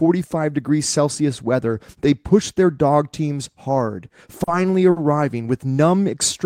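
Short stalls from late packets at 4.43 and 4.90 s: the jitter buffer ran dry, so speech holds for 40 then 60 ms, with a slight buzz or dip, with nothing lost.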